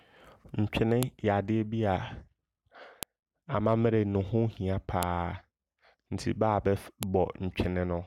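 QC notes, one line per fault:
1.03, 3.03, 5.03 and 7.03 s, file header played as audio: a sharp, loud click or snap cuts through the speech at each of these points, arriving every 2 s regardless of what the signal is doing. The audio was joined or streamed as separate 2-second WAV pieces without stripping their headers, so the few dozen bytes of header data at the start of each piece are played back as if they were samples, producing a brief burst of garbage.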